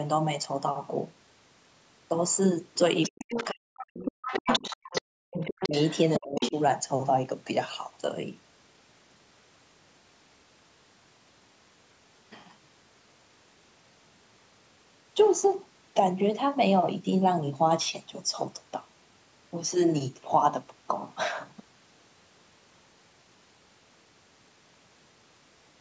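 Other side's voice leaking through, from 3.03 to 6.62 s: a second voice sits roughly 10 dB under the talker, likely because the far end played over a loudspeaker and the echo canceller failed to strip all of it from the microphone signal.

Speech suppressed in double talk, at 3.09 to 4.81 s, 5.34 to 5.75 s and 6.19 to 6.54 s: the talker's voice drops away in pieces, by around 40 dB in the first two stretches and around 30 dB in the last. This is likely the canceller mistaking both voices for echo and pulling down the whole signal.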